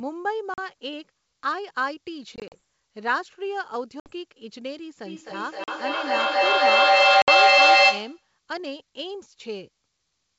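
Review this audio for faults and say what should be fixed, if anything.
Packet loss on an ADPCM call occurs at 0.54 to 0.59 s (40 ms missing), 2.36 to 2.55 s (80 ms lost in scattered pieces across about 160 ms, none longer than 40 ms), 4.00 to 4.13 s (60 ms), 5.64 to 5.69 s (40 ms) and 7.22 to 7.28 s (60 ms). Each gap is a hard-edged silence. Because ADPCM codes each sample as a difference from a running prediction, the receiver's predictor and step size stop tracking the sender's during the gap. The sound then comes back slightly distorted before it settles. To prevent it, add packet loss concealment and a decoder state reset or resync after lost packets, and fix the network loss itself with jitter buffering or FEC.

Feedback echo between two devices runs from 5.06 to 8.33 s. Two devices on the same call share a room, so one plays back what the other's microphone sent, and that microphone picks it up again. 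Each device's echo canceller only removes its own playback, so this loop goes unchecked. The sound returns about every 300 ms, growing thinner and more ringing on each pass. At its loudest it sits about 13 dB above the direct speech, so the repeats stack up rather than fading. To prevent it, mute the microphone or speaker on one of the co-located devices, or join the call from only one device in the room.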